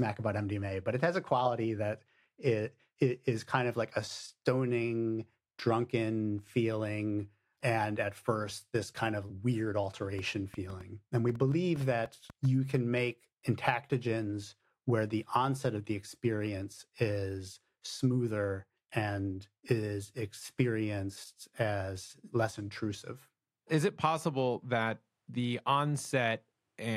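A speech recording with a train of clicks running from 10.19 s to 12.76 s, starting just after "this kind of weird" and clearing before "make intactogens where the". About fifteen similar pops arrive at roughly 5 per second but with uneven spacing, ticking over the talk and gaps alike at a level close to the speech itself. This is likely interference or a faulty connection or power supply injecting pulses. On a spectrogram they show as thin full-height vertical lines; the waveform shows sharp isolated spikes.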